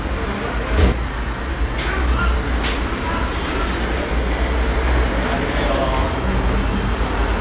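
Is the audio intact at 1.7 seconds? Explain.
No. From 1.02 to 4.03 s a jitter buffer speed-up trims pitch-period slices, about a fifth of a second in total, so sound runs roughly 6% fast at unchanged pitch.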